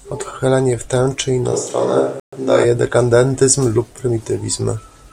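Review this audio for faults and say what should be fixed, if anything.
The close microphone's feed likely dropped out between 1.54 and 2.63 s, leaving a more distant pickup to carry the speech. The sound turns roomy and hollow with thinner bass, and room noise sits roughly 35 dB below the speech, though the overall level barely changes. The switch in and back out is abrupt. This switch to a distant microphone should be fixed by monitoring the close mic's connection and battery, and keeping it selected as the primary source.

A digital broadcast dropout occurs from 2.20 to 2.38 s, inside the distant-microphone stretch. The receiver lost valid frames and muted until clean data returned, so the audio falls silent and then resumes. About 128 ms of transmitted material is gone, which fits three failed frames, and it cannot be recovered from this copy. Preventing it means securing a stronger, more stable reception path, or recording the programme at the source instead of off air.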